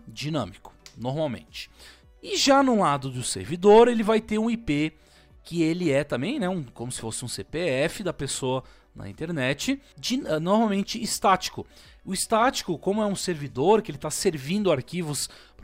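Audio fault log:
No faults heard in this clip; nothing to log.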